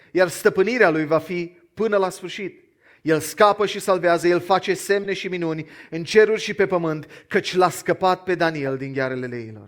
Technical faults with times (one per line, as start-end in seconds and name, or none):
2.95-2.98 corrupt frame decoded
5.04-5.06 corrupt frame decoded
8.66-8.72 corrupt frame decoded